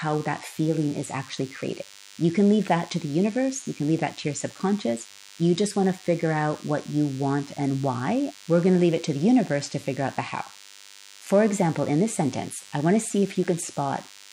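From the first moment to the end, a thin, steady buzz sits under the speech. This is DECT cordless phone buzz. A cordless handset or base station nearby transmits a short radio burst every 10 ms. The audio circuit picks it up and rectifies it. The result is a tone at 100 Hz, rich in harmonics, so it sounds raspy rather than like a pure hum. It stays roughly 25 dB below the speech.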